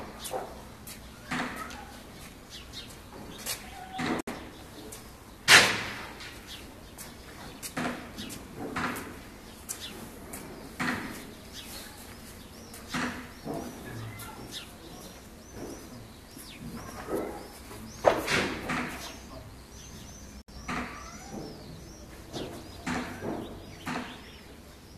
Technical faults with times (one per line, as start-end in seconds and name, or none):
4.21-4.27 gap at a join of encoded pieces
20.42-20.48 gap at a join of encoded pieces